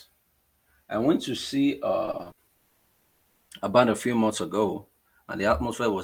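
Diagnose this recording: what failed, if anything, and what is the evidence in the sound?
The network failed first. Repeated packet loss (robotic sound) runs from 2.05 to 2.57 s, just after "I went to see". Seven short holes, the longest 60 ms, were patched by repeating the last sound. That patching covers about 35% of the stretch, so it sounds choppy and robotic.

A long network dropout follows from 2.57 to 3.51 s. For 0.92 s the speech is replaced by a held-over buzz or hiss that fades, the receiver's continuation of the last sound. Speech resumes at "a band a few" with audio missing. The likely cause is a network outage.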